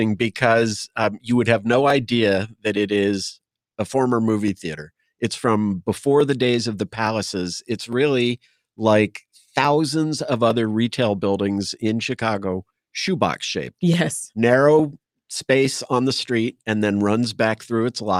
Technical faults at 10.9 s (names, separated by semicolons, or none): clock drift buffer slips